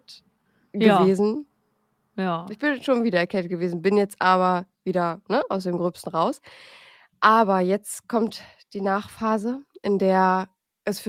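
This is a speech clip in which the sender's audio clock runs about 2% slower than the receiver's, a case of clock drift between sender and receiver. The receiving jitter buffer keeps draining, so the audio never settles into a steady pace, and faint timing hiccups recur at uneven intervals. To stay in step, the receiver makes repeated timing corrections from 0.36 to 10.82 s, repeatedly repeating short pieces so playback runs at 98% speed. Together these stretch the passage by about a fifth of a second and leave the tempo slightly unsteady.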